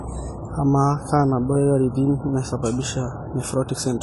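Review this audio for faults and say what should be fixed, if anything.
Throughout the speech the top end stops abruptly at 11.5 kHz, and the codec damage is plainly audible: sibilants sound fizzy and smeared, and sustained vowels carry a warble. The likely cause is AAC compression, specifically AAC-LC at a low bitrate, around 32 kbps. At that rate the encoder drops the highest band and coarsely quantises what remains, leaving spectral gaps that the ear hears as swirling artefacts. To prevent it, export or transmit at a higher AAC bitrate or keep a lossless master.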